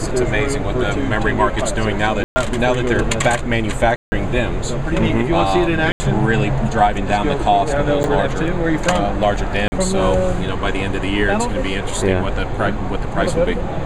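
The audio is interrupted five times by blocks of digital silence: 2.24–2.36 s (120 ms), 3.96–4.12 s (160 ms), 5.92–6.00 s (80 ms), 8.03 s (8 ms) and 9.68–9.72 s (40 ms). Each cuts abruptly to silence and back. The longer ones sound like holes and the 8 ms one like a tick. This points to the output buffer not being filled in time. A waveform shows flat silent stretches, and a spectrogram shows black gaps bounded by full-band vertical lines.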